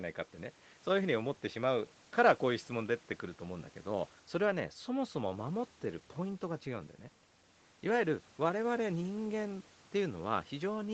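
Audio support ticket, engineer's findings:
Speech sits well above a low room-noise floor, about 31 dB down, with content ending near 8 kHz as expected for a wideband Opus call path, and no defects found in the signal.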